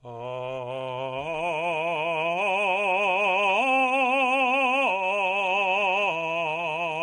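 A low-delay AAC encoder, likely AAC-ELD at a reduced rate in the range of 32 kbps, squeezes this music clip throughout. Its short frames resolve harmonics poorly, so the music sounds plainly rough and grainy, with noise between tones and nothing above 11.5 kHz.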